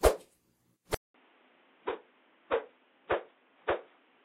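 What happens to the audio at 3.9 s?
At 3.9 s the sound is dull and narrow, with nothing above 3.8 kHz, about 10 dB quieter than at the start, and carrying a new background noise roughly 35 dB below the signal. This quality begins at 0.94 s, after a 200 ms silence, and lasts to the end at 4.24 s. The likely cause is the input switched to a poorer device, whose narrower band, lower level and own noise floor replace the original microphone's.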